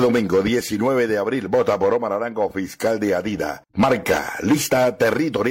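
No technical faults can be heard in this audio.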